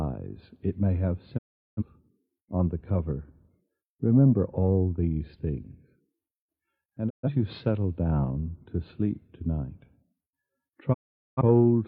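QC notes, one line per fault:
1.37–1.83 s: digital broadcast dropout. The sound fades out over about 20 ms and stays silent for roughly half a second. The receiver muted on corrupt or missing frames, and that programme is gone.
7.08–7.28 s: digital broadcast dropout. A shorter hole of about 0.2 s, with the same quick fade, which fits a few failed frames.
10.92–11.41 s: digital broadcast dropout. An almost half-second mute with a 20 ms fade. The sound resumes only when valid frames return.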